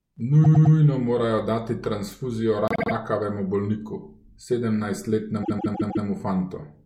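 Repeated frames in this speech clip: short runs of compressed frames were delivered more than once, so a block of about 105 ms replays three extra times at 0.43–0.75 s, before "morajo dati transfuzijo rakavemu"; a 78 ms block replays three extra times at 2.68–2.92 s, between "morajo dati transfuzijo" and "rakavemu bolniku"; and a 157 ms block replays four extra times at 5.42–6.05 s. Each is a stutter, and each adds its repeated time to the audio.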